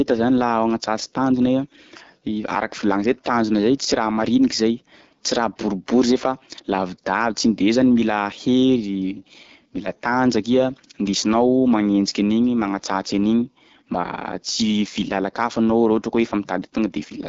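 From start to finish, the speech carries plainly audible AMR wideband (HD Voice) codec damage. It sounds rough and raspy, which fits one of the codec's lowest rates, around 8.85 kbit/s. A spectrogram shows smeared, noise-like detail near the top and a hard ceiling at 7.5 kHz.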